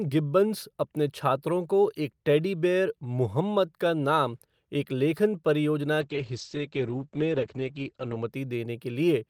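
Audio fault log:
6.01–8.36 s, call bitrate drop: just after "नाम एक लेखन परियोजना", the encoder coarsens sharply, consistent with falling from about 48 kbps to 13 kbps, holding its lowest for 2.16 s. The top end narrows from 20 kHz to 8 kHz, leaving the speech muffled and rough.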